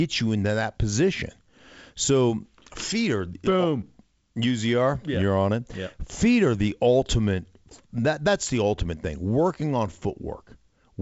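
No technical faults can be heard in the speech. It has passed through G.722 wideband telephone coding at 56 kbit/s, so nothing reaches above about 7.7 kHz, and the coding leaves only light traces.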